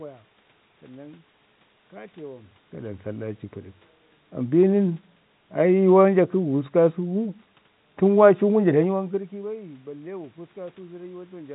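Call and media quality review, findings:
No system faults found: the speech sits in a normal telephone band with nothing above about 3.9 kHz, consistent with G.711 A-law coding at 64 kbps; room noise is audible, and the level shifts near 2.5 s and 9 s come from the talker moving relative to the microphone.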